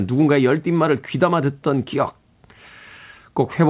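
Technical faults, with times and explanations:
No technical faults detected.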